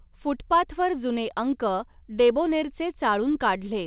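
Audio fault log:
No faults are present: the speech reaches the listener over a WebRTC call path working as designed, with G.711 mu-law coding at 64 kbps leaving its usual coding noise and nothing above 4 kHz.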